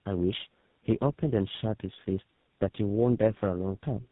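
From start to finish the speech carries tandem speech coding, where the call seems to have been decoded and coded again through several speech codecs in a row. The sound points to three of them, perhaps an ADPCM stage, then a CELP stage, ending on GSM full rate. Each one chews on the previous one's artefacts, so it comes out rough, muffled and warbly. Nothing survives above about 3.8 kHz.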